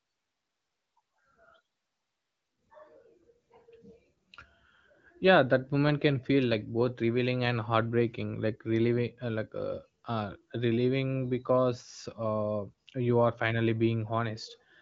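No technical faults can be heard in the speech. The AMR wideband (HD Voice) codec shows as a band limit with nothing above 7.5 kHz, and the speech stays clear, which fits one of its higher rates such as 18.25 kbit/s.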